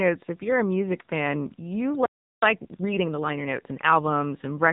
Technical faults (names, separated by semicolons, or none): AMR narrowband mobile codec; playback stall; time-compressed catch-up